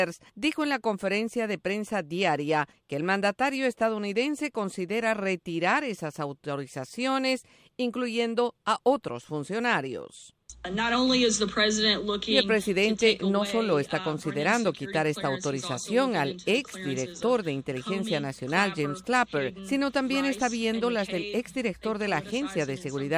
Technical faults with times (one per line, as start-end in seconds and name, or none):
none